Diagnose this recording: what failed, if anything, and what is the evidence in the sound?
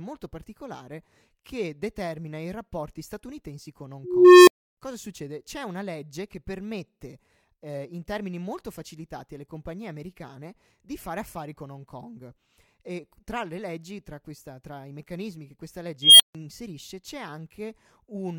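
Unstable filter in call processing. At 4.04 s, a low tone near 400 Hz swells, then falls silent for 0.3 s. After "i meccanismi che questa", a squeal near 3 kHz at 16.02 s does the same, but falls silent for 0.15 s. Recursive feedback runs away, overflows, then resets.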